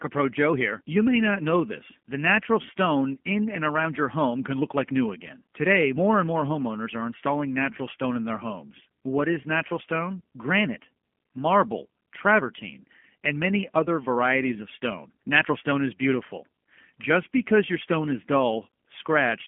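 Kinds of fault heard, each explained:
G.729 codec: the speech is rebuilt from a vocal tract model and a few pulses, which fits an 8 kbit/s coder, so it sounds plainly rough and synthetic. Unlike a bare 250 Hz to 3.4 kHz phone band, the damage lies inside the band, not only at its edges.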